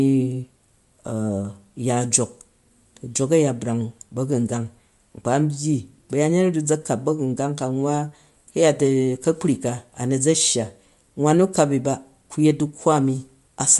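The speech carries Bluetooth LC3 compression damage from start to finish, plainly audible across the whole clip. Nothing reaches above about 11.6 kHz. The top of the spectrum is simply gone. The sound has a breathy, grainy edge where the encoder filled thinned upper bands with noise instead of real detail. That texture fits the 10 ms transform frames of LC3. It likely comes from a Bluetooth LE Audio link running near 48 kbps.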